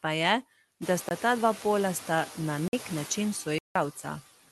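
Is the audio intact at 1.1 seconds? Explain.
No. From 1.09 to 1.11 s there is a block of digital silence about 22 ms long: a run of samples was replaced by zeros, as happens when the output buffer isn't filled in time. The sound drops to nothing and returns with no fade, and a brief hole is heard in the speech. On a waveform this is a flat line near zero with abrupt steps at both ends. On a spectrogram it shows as an empty vertical strip framed by thin broadband lines.

Across the clip, including this moment, noise suppressor artifacts are also present. The suppressor pulls down bands it judges to be steady noise, frame by frame, cutting that noise by about 13 dB. This matters here because the room noise climbs sharply around 1 second, so the noise sinks between syllables and rises under them, and the speech can sound thin. A spectrogram shows a blotchy, flickering noise floor that dips in pauses and swells under the voice.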